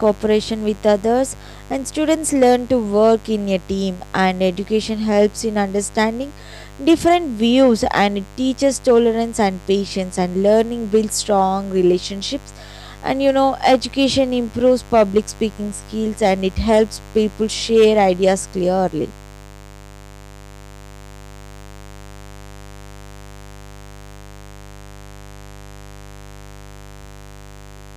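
From start to finish, a steady, raspy mains buzz sits under the speech, loud enough to stay audible at roughly 20 dB below it. Sharp switching spikes from the 50 Hz supply leaked into the signal path twice per cycle, spreading harmonics up into the kilohertz range.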